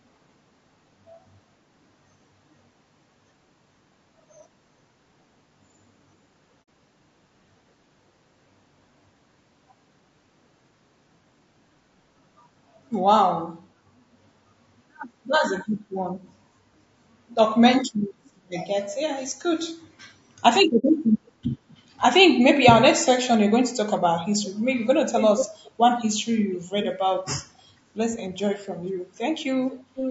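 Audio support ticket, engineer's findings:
Rough, grainy speech throughout, noise filling between harmonics, top band thin and synthetic-sounding. Likely low-delay AAC compression (AAC-ELD) at a low bitrate, around 32 kbps: short frames resolve pitch poorly. Constant, unlike the isolated dropouts below.

Soft-edged holes at 6.63–6.67 s and 20.78–20.85 s, roughly 60 ms each, fading out and back in. AAC frame loss with muting: the decoder zeroed the spectrum of two lost frames, and window overlap smoothed the edges.

Delayed copy of the speech, about 0.48–0.49 s behind, consistent across all events: faint scraps at 18.25–18.30, 21.26–21.31, 21.96–22.00 and 27.57–27.62 s; strong and sustained at 25.17–25.71, 26.53–26.93 and 29.71–30.1 s. Echo leak, likely from a far-end loudspeaker with an incomplete echo canceller. A fixed delay distinguishes it from room reverb.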